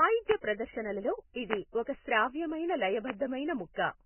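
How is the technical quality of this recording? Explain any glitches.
The recording is poor. The speech is damaged all the way through, and it is broken by three sharp pops.

Vorbis compression affects the whole clip. Nothing is heard above about 3.1 kHz, so the speech sounds dull and boxed in. The damage is heavy. The sound points to a very low bitrate, around 10 kbps, and the likely cause is Vorbis encoding at low quality. The codec keeps a smooth outline of the spectrum and codes the detail on top very coarsely. That detail turns into grainy hiss, and consonant onsets smear.

A loud pop occurs three times: 0.31 to 0.33 s, 1.53 to 1.55 s, and 3.10 to 3.12 s. Each is a single sharp click, roughly 20 dB above the speech. The speech continues beneath each one. A sudden voltage step or pulse was added to the signal, likely from a plug, a switch, static or a driver glitch. The circuits after it shaped that pulse into the short pop you hear.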